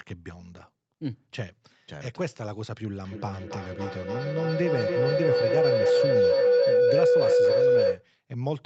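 In this speech recording, two devices on one call in the same room formed a loop that gained on each pass. From 3.02 s to 8.11 s a feedback howl swells to about 9 dB above the speech, narrowing to around 500 Hz, its repeats roughly 0.3 s apart.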